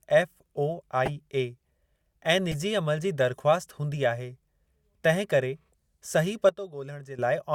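At 1.05 to 1.10 s, a corrupt frame decoded produces a chirp, squeak or burst of noise across about two frames. Another follows at 2.51 to 2.55 s, quieter, one frame. Damaged data was played as sound.

After "तिंहिं करे सही", at 6.49 s, a sudden gain jump drops speech and background together by about 12 dB until 7.19 s. The likely cause is a gain change applied without a ramp.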